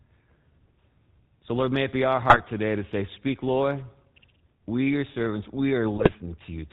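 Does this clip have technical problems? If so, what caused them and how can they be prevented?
Yes. Throughout, the speech sounds buzzy and gravelly, with nothing above 4 kHz, which fits the GSM full-rate codec at 13 kbps. It models the vocal tract and drives it with a coarse, regularly spaced pulse train, losing fine detail. A wideband codec would prevent this.

Squawks and gargling break in from 2.23 to 2.40 s, after "may it be our" and before "today to say", and again from 5.96 to 6.13 s, after "your servants". These are GSM bit errors: corrupted filter, pitch and gain values distorted the spectrum and level of several frames. Better signal coverage and decoder error concealment would prevent this.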